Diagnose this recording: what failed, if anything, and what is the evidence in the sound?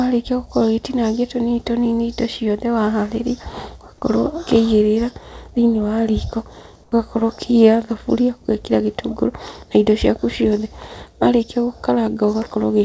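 After "ũkĩigĩrĩra thĩinĩ wa riko", from 6.84 to 6.92 s, the background turns flat and about 10 dB quieter. That's likely comfort noise in place of the background, from discontinuous transmission in call processing.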